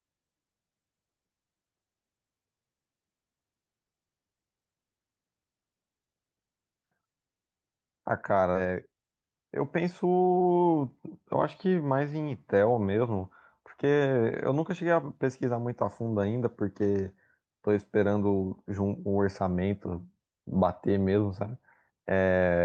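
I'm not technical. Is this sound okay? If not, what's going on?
No. At 8.55 s there is a skip ahead: roughly 0.7 seconds of the speech is simply missing, and playback jumps straight from one side of the gap to the other with no silence, so part of what was said is lost.

Right after, from 8.65 s to 10.51 s, comes a jitter buffer speed-up. The receiving end had built up too much waiting audio and trimmed tiny slices to catch up, about a fifth of a second in total. The speech runs roughly 9% faster at normal pitch and sounds hurried.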